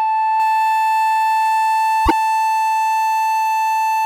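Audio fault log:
0.40 s to the end: pre-emphasis left on. The music's treble is boosted and never cut back. The curve matches the FM 75 µs standard, about 14 dB stronger at 10 kHz than at 1 kHz. The music turns thin, bright and hissy.
2.03 to 2.12 s: damaged data in a compressed stream. A short stretch of the encoded stream is corrupt. The decoder misreads those frames, loses its place and hunts for the next valid header. The music briefly chirps or squawks there.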